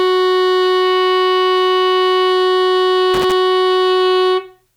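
From 3.14 to 3.33 s the music breaks into loose connector crackle: a worn or dirty contact making and breaking, chopping the signal into an irregular scratchy burst. The waveform shows ragged dropouts and spikes; the spectrogram shows scattered broadband vertical streaks.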